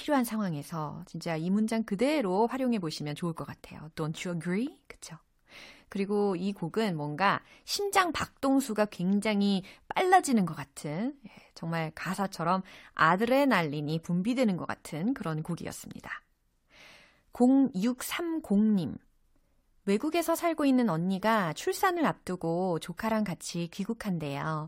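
Listening through the recording, nothing stood out as a technical fault at any point.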